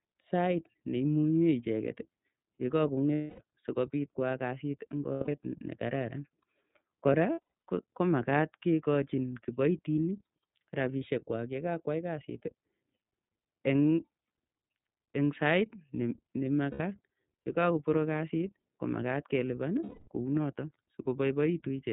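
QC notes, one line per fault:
Throughout: iLBC codec. The sound is band-limited below 4 kHz, with a rough, slightly synthetic edge from independently coded 30 ms frames at 13.33 kbps.
3.15–3.40 s, 5.13–5.29 s, 7.32–7.69 s, 16.71–16.80 s, 19.83–20.08 s: lost iLBC frames. Each gap is filled by a repeated pitch cycle mixed with noise, so it sounds like a held, buzzy vowel. The voice is right again almost immediately. At 7.32 s the dropouts are scattered, with the longest around a tenth of a second.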